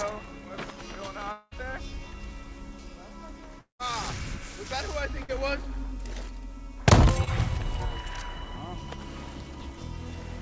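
From 1.32 to 1.53 s and again from 3.59 to 3.81 s, the last sound is held as a buzz or hiss that fades into silence, about 30 ms of it the first time and about 120 ms the second. The audio then resumes further on. This is likely a long network dropout: roughly 200 ms of audio never arrived each time, and the receiver filled the gap by extending what it last had.

Between 5.23 and 5.30 s the sound is briefly held and turned down, then picks up with a skip. This is a burst of packet loss. About 60 ms of audio went missing, and the receiver covered it with 52 ms of continued, fading sound before jumping ahead.

From 7.24 to 7.29 s there is a quick smear or wobble as the sound is stretched for a moment and blended back. This is short concealed packet loss: about 20 ms failed to reach the decoder in time and was patched with 23 ms of extrapolated audio. Throughout, nothing is heard above 8 kHz, which fits a G.722 call codec at 64 kbps.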